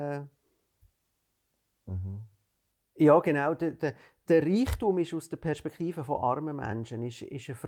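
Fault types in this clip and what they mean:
No faults detected in the speech; nothing to report.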